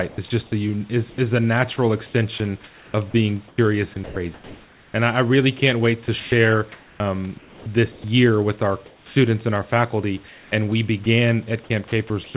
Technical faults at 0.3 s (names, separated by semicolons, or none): sound chopped by the voice detector